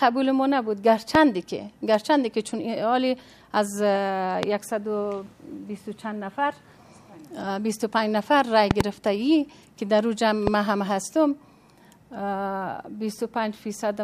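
A sudden voltage step, likely from a plug, switch or static discharge, causes loud pops at 1.15–1.17 s, 4.43–4.45 s, 8.71–8.83 s (a double) and 10.47–10.50 s. Each is a sharp thump roughly 20 dB above the sound, which carries on beneath.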